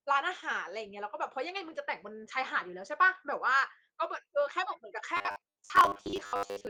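From 5.17 s through to the end at 6.69 s, the speech turns into that robotic sound from repeated short buffers: a rigid, metallic buzz sitting at 100 Hz that still loosely tracks the talking. What it likely comes from is audio arriving too slowly, so the playback keeps looping the last chunk, about 10 ms given that buzz pitch, and roughly half of what you hear there is repeats rather than fresh audio. Underneath, the Opus voice compression's light coding texture is still faintly audible.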